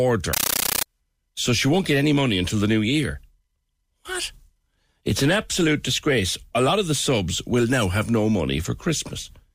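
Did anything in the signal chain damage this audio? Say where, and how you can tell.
Yes, at the digital link: from 0.33 to 0.86 s, before "so she won't get", loud 13 ms static bursts chatter 31 times a second. That's a compressed stream played as audio, undecoded.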